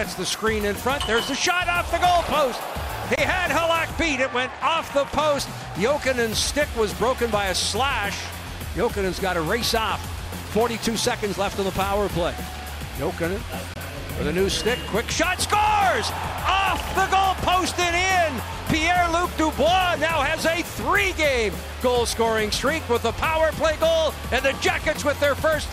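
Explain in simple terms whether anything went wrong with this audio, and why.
Two brief silent gaps, at 3.16 to 3.19 s and 13.74 to 13.77 s, are likely a Bluetooth dropout: about 21 ms of sound missing, which fits one lost packet.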